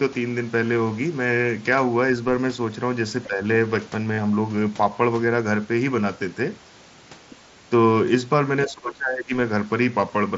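It's a speech clip carried over a Bluetooth headset link, with the light graininess on loud syllables you'd expect from mSBC. At 3.27 to 3.4 s the voice dips by about 10 dB, and from 8.65 to 9.31 s it drops harder, about 20 dB. That's likely speech suppressed in double talk, with the echo canceller ducking the talker while the far end spoke. Around 4.14 to 4.21 s you get concealed Bluetooth headset packet loss: roughly 45 ms of audio gone within 60 ms, the longest gap 37.5 ms, patched with a held buzzy tone and a little warble on recovery. At 7.30 to 7.36 s a faint scrap of another voice, about 25 dB under the talker, slips in, likely the other side's voice leaking through past the echo canceller.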